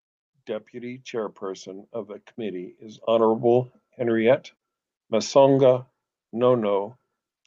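Automatic gain rising from 0.46 to 3.9 s: the gain control, finding the input too quiet, lifts level by about 9 dB, swelling voice and background together.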